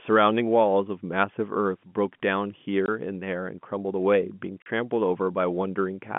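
At 2.86 to 2.88 s and again at 4.62 to 4.66 s there's packet loss filled with silence: 20 ms then 40 ms holes, which fits 20 ms packets, cut with hard edges into the narrow telephone-band G.711 speech.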